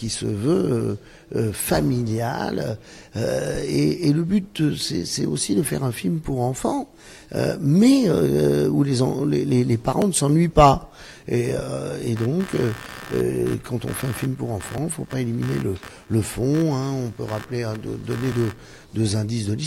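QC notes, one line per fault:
10.02 s and 14.78 s: dropped buffer (overrun). The sound jumps ahead with no gap, losing about 10 ms each time. Likely unread samples were overwritten.
12.16–18.85 s: computer activity noise. A pulsing buzz near 70 Hz sits about 20 dB below the signal. It follows the computer's load, not the audio.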